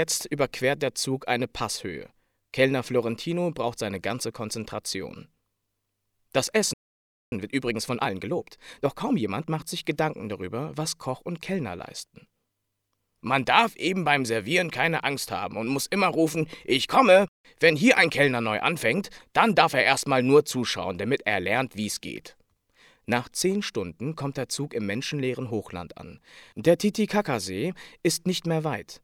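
The player most likely ran short of data or had its output thread blocked, so this audio cuts to silence at 6.73 s in a playback stall lasting about 0.58 s before sound returns at 7.32 s. To recover the backlog that built up during the gap, the player then applies time-compressed catch-up from 7.32 s to 9.64 s, trimming and cross-fading small slices so the audio runs at 1.25 times normal speed while keeping its original pitch, which makes that stretch sound audibly hurried.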